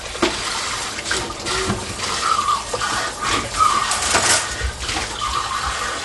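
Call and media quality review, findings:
Likely Dolby Digital compression at a starved bitrate, whole clip: encoder narrowed the band and left many frequency lines without mantissa bits, filled with dither noise on decode. Result: nothing above 11.5 kHz, dull top, plainly audible rough fluttering noise around tones; fits roughly 64 kbps.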